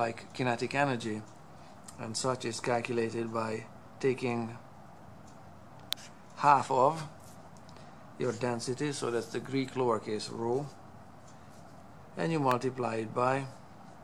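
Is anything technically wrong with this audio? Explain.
Yes, there are two electrical switching spikes, at 5.93 s and 12.51 s. Each is a sharp snap sitting on top of the audio, very short, peaking somewhere around -10 dBFS for the first and around -15 dBFS for the second. The likely cause is a nearby switch, motor or static discharge arcing briefly, with the audio line picking up that burst of interference.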